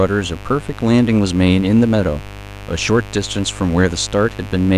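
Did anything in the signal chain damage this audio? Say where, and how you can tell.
Yes. A steady, raspy buzz runs under the speech from start to finish, sitting fairly high relative to the speech, around 15 dB below it. This is mains buzz, and it entered in the analogue wiring. The buzz is built on a 50 Hz fundamental, and its harmonics climb into the kilohertz range. That points to sharp switching spikes, twice per mains cycle, from a dimmer, a rectifier or poor shielding, coupling into the cable before conversion.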